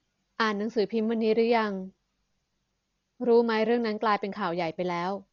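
From start to finish the speech sounds dull and muffled, with nothing above 7 kHz and a rough, fluttering noise clinging to voiced sounds. That is likely Dolby Digital compression at a very low bitrate, around 40 kbps. To save bits, the encoder dropped the top band and left many frequency lines empty, which the decoder filled with noise.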